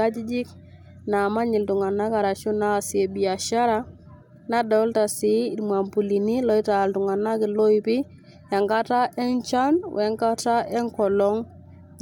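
No technical faults are audible.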